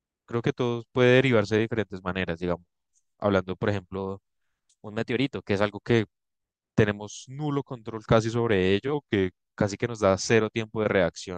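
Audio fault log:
3.98–5.73 s and 8.94–9.44 s, drift correction step: speed and pitch shift together, 6.25% faster and 105 cents sharp in the first span, 6.25% slower and 112 cents flat in the second, each snapping back. Likely clock-matching software stepping its playback rate to drain, then refill, its buffer.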